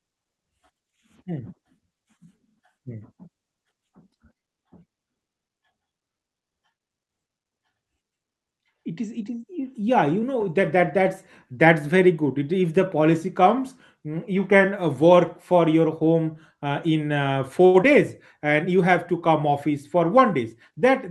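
Speech carried over a call link whose coding, band-limited to about 12 kHz, fits Opus at around 32 kbps. A short stall from a late packet at 17.65 to 17.76 s emptied the jitter buffer, so the receiver held the last sound for 87 ms, a stretched moment with a slight buzz or dip and nothing lost. Just after, at 17.82 to 17.85 s, short concealed packet loss dropped about 40 ms of audio, bridged by continuing the preceding sound and leaving a brief smear or wobble. From 19.95 to 20.72 s, a jitter buffer speed-up trimmed short pitch-period slices, roughly 50 ms in total, so the speech runs 6% faster at unchanged pitch and sounds slightly hurried.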